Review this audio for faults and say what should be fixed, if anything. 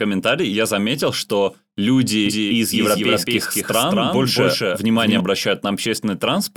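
A doubled audio track runs from 2.26 s to 5.20 s. The speech there is heard twice: a second, full-band copy trails the first by around 200 ms at roughly the same loudness, with no decay or room colour. It cuts in and drops out abruptly at those two points. This is likely a second capture of the same signal through a slower route, or an edit holding two misaligned copies. Mute or remove the duplicate path so each source reaches the mix only once.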